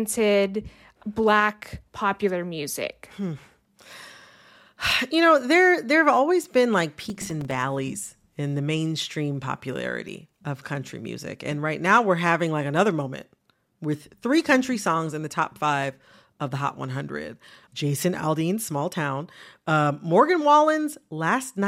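Speech, with processor overload crackle from 7.10 to 7.55 s, just after "have always been like": the processor kept missing deadlines for buffers of a few milliseconds, and each miss left a hard-edged sliver of silence, so around fifteen chained gaps tear through the speech as gritty crackle.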